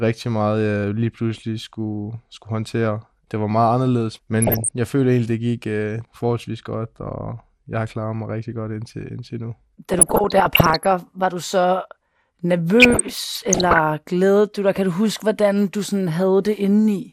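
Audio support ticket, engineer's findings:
MP2 compression, throughout: dull, gurgling, granular sound, plainly audible. Likely cause: MPEG Layer II coding at a rate fitting roughly 80 kbps. Too few bits across its 32 sub-bands switch upper bands off or make them flicker, and the remaining bands are coarsely quantised.

DAB burbling at 4.42–4.71 s, 9.92–10.91 s and 12.80–13.78 s: bursts of burbling. Reception bit errors, under 1%, pass the error correction into the MP2 data. Corrupted samples blip single sub-bands, or corrupted scale factors jump their level for up to a frame.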